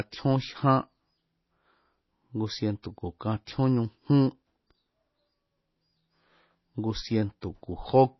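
Throughout the speech, the treble stops dead at 5.8 kHz and the upper range turns watery and swirly, with sibilants chirping metallically. This is likely MP3 compression starved of bits, consistent with roughly 24 kbps. A spectrogram shows a flat ceiling and speckled, flickering holes where weak lines drop out.

At 2.83 s, pre-echo puts a short hiss about 13 ms ahead of a sharp attack. The block's quantisation noise has spilled into the quiet moment before the onset, blurring it. On the waveform, low fuzz precedes the jump. The spectrogram shows a smear before the onset.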